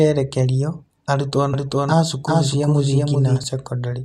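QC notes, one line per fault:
1.54–3.44 s, doubled audio track: a full-band copy of the speech runs roughly 0.4 s behind at about the same level, starting and stopping abruptly. Unlike echo, it has no decay and no room colour. The likely cause is a second, slower capture path.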